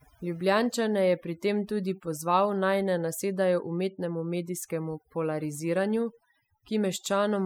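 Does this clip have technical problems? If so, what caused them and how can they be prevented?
Yes, overdone noise removal runs throughout: bands near the noise floor get gated out, so the background goes twinkly-silent and quiet parts of the speech go with it. Go gentler on the reduction amount.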